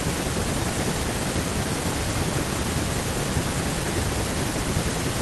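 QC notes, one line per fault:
No technical faults were found in the signal at any point in the speech.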